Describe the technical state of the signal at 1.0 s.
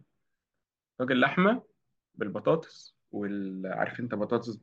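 At 1.0 s the signal is intact, with no dropout, clipping, glitch or other technical fault audible at that moment.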